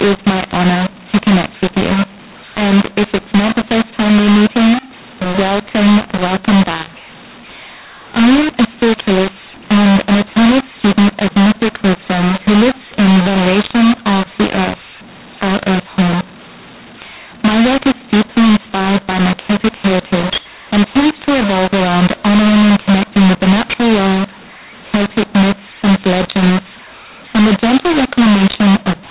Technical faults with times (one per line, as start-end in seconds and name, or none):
0.00-29.10 mu-law and A-law mixed up